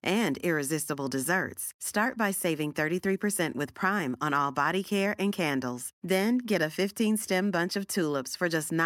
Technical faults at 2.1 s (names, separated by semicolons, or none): none